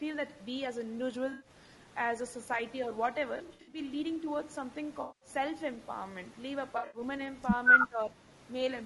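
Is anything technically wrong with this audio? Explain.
Yes, there are a few problems. Throughout, the speech sounds rough and grainy, with noise between the harmonics and a thin top end. That's likely low-delay AAC compression around 32 kbps, where short frames can't resolve pitch well.

There's AAC frame loss with concealment at 1.31–1.49 s, 3.37–3.79 s, 5.01–5.29 s and 6.77–7.01 s. The decoder patched the gaps from the last good spectrum, so you hear smeared, noisy, phasey bits.

At 7.88–8.32 s the speech dips by about 10 dB for almost half a second, likely speech suppressed in double talk, with the echo canceller ducking the talker.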